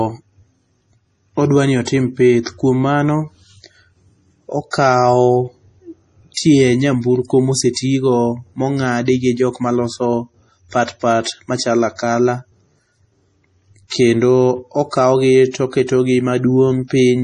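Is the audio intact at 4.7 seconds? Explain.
No. A pre-echo runs from 4.71 to 4.73 s, about 25 ms. The codec smeared its coding noise across the whole block, so a short hiss fills the quiet moment before a sharp attack. The attack itself sounds soft and blurred.

The speech also carries heavy damage, likely from MP3 compression. Nothing remains above 11.2 kHz, which fits a low bitrate of around 32 kbps. Weak frequency lines switch on and off between frames. That gives a watery, swirly texture and metallic chirps on s sounds.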